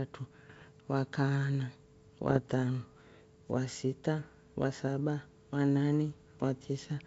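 A speech clip carried over a G.722 wideband link, with bit errors on an ADPCM link in two spots: 0.49 to 0.68 s, then 2.28 to 2.50 s. You get pops and rough, gravelly bursts with quick level jumps. A flipped bit disturbs the decoder's step size and predictor, so each error rings on for a few milliseconds rather than clicking once. The error rate is roughly half a percent in the first patch and a bit lower in the second.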